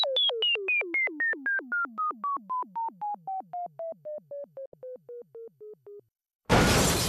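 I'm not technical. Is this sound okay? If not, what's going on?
No, there's one glitch. At about 4.66 s the sound briefly cuts to silence for roughly 70 ms and comes back at 4.74 s. That's a digital broadcast dropout: the receiver lost a few chunks of the signal, likely around three frames, muted rather than play garbage, and that bit is simply gone.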